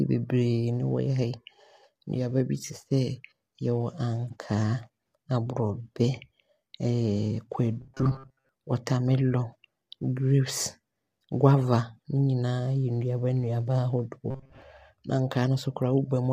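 Low-delay AAC compression runs through the whole speech clip, likely AAC-ELD at around 32 kbps, whose coarse coding fills the gaps between pitch harmonics with noise, giving a plainly audible rough, grainy texture. Robotic sound from repeated short buffers appears from 7.81 to 8.49 s and from 14.31 to 14.62 s, a rigid metallic buzz at 133 Hz. It is likely caused by late audio being replaced with loops of a roughly 7.5 ms buffer, with most of the real sound skipped.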